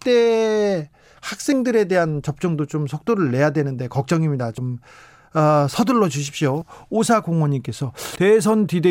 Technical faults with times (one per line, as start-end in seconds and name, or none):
1.52 compressed frames skipped
4.57 compressed frames skipped
6.61 compressed frames skipped
8.15 compressed frames skipped